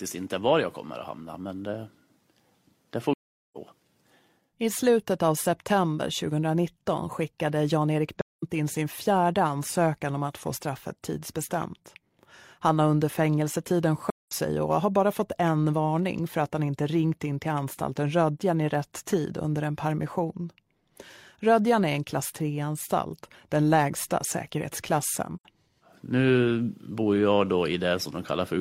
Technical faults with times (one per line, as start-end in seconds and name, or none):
3.13-3.57 AAC frame loss with muting
8.21-8.43 AAC frame loss with muting
14.10-14.32 AAC frame loss with muting
25.35-25.45 AAC frame loss with muting